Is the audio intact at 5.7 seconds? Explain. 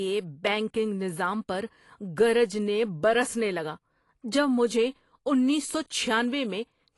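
No. At 5.75 s there is a brief jump in the speech. A few milliseconds of audio are missing, with no gap of silence. The likely cause is a dropped buffer (overrun): samples went uncollected, the hardware overwrote them, and the two sides were joined directly.

The whole stretch also sounds dull and smeared, with plainly audible fizzy, warbling texture. This is likely AAC compression at a low bitrate, consistent with about 32 kbps AAC-LC, which cuts the top band and coarsely quantises what remains.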